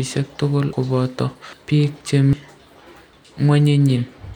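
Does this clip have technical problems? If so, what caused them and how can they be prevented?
Yes. Audio missing between chunks at 0.73, 2.33 and 3.13 s: the speech skips forward, losing about a fifth of a second each time with no gap left behind. This is likely a recorder handling audio in one-second chunks and dropping material at each handover. Overlapping or double-buffered chunk handling prevents it.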